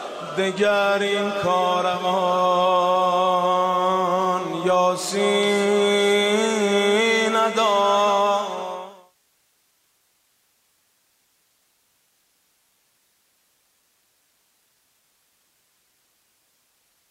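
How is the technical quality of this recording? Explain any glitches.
No technical faults are audible.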